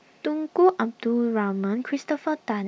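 No technical faults can be heard anywhere in the recording.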